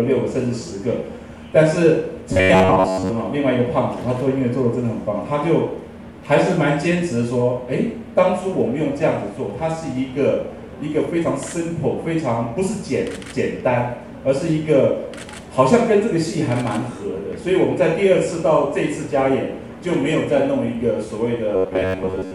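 From 2.33 to 3.11 s, and again from 21.56 s to the end of the clip, the sound takes on a robotic quality from repeated short buffers. A rigid, metallic buzz near 93.8 Hz replaces the natural texture, likely because incoming audio was late and a chunk of roughly 10.7 ms was looped to fill the gap. Most of each stretch is repeated material rather than fresh audio, so the buzz is fixed in pitch while the overall contour loosely continues.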